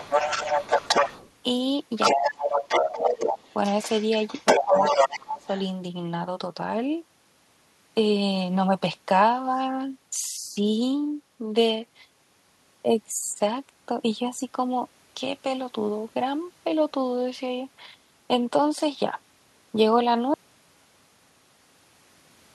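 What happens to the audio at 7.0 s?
Nothing goes wrong at 7.0 s; the speech carries on intact through that moment with no dropout, click or distortion.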